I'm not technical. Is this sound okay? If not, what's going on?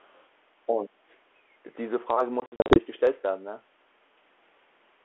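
No. There are a few separate problems.

For the first quarter second, up to 0.25 s, a very faint second voice sits quietly under the sound. This is the other side's voice leaking through. The likely cause is that the talker's phone played the other person on its loudspeaker and the microphone picked it up again. The phone's echo removal caught most of it but not quite all.

Between 0.67 and 1.11 s the speech suddenly sinks far down in volume, and for a moment it almost vanishes. This is speech suppressed in double talk. The likely cause is that both people spoke at the same moment. The phone couldn't tell the talker apart from the loudspeaker echo, so it turned everything down together.

At 2.20 s and again at 3.07 s there is a single tiny, sharp click. These are dropped samples. The sound was most likely missing a sliver of the recording far too brief to notice as a gap. The waveform jumps straight from one point to a later one, and that sudden step is heard as the click.

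From 2.4 to 2.8 s the speech breaks up into a series of short holes, the longest lasting about 60 ms. This is packet loss on an ADPCM call. Small chunks of the call's data never arrived and were filled with silence. Each time the sound comes back, the decoder is briefly out of step with the sender, so the speech returns slightly rough or at the wrong loudness before settling.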